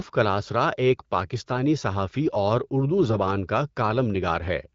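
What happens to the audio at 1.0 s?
Right at 0.97 to 1.02 s, just before "پاکستانی صحافی اور اردو", there's a burst of AMR bit errors. A couple of percent of the weakly protected bits got flipped in what sounds like a few frames, so the excitation pulses and fine gain values land wrong. That gives a quick hoarse, gargly scratch, even though the pitch and level roughly hold.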